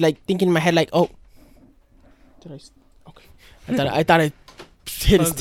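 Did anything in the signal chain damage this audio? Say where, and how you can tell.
No, nothing along the signal chain audibly damaged this speech recording, and the signal shows no sign of a fault at any stage.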